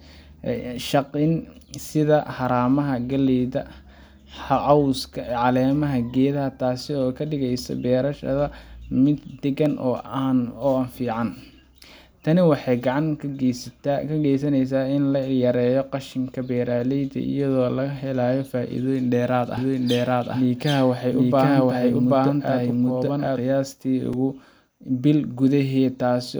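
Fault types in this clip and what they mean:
Block of digital silence: at 9.66 s and 24.13 s, the sound drops abruptly to silence and returns with no fade. The first hole lasts 0.73 ms, which fits a 32-sample block, and is heard as a tick. The second lasts 4.04 ms, still short enough to be heard as a tick rather than silence.
Doubled audio track: from 19.6 s to 23.4 s, a second full-band copy of the speech runs roughly 0.7 s behind at about the same level, with no decay or room colour. It starts and stops abruptly, likely from a slower second capture path.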